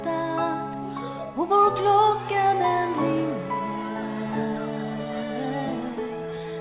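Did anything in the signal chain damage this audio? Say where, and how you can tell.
No, nothing in the chain damaged this audio; it went through a call path, and the way it stops at 4 kHz fits ordinary narrowband G.711 mu-law coding, which is just what that codec does.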